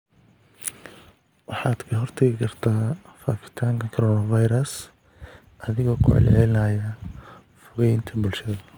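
A speech recording that, from 4.71 s, just after "faafitaanka coronavirus", to the end, carries a gritty, inharmonic fizz from crude rate conversion. Samples were likely repeated rather than filtered, which fits a 44.1 kHz to 48 kHz step, leaving error about 35 dB down. Unlike codec swirl, it tracks loud, bright syllables.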